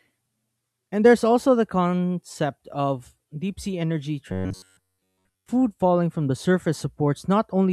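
Right after "of deep sea energy", from 4.32 to 5.49 s, the speech turns into a stiff metallic buzz pinned at 93.8 Hz. That's robotic sound from repeated short buffers, likely because audio arrived too late and the last ~10.7 ms kept looping the whole way through.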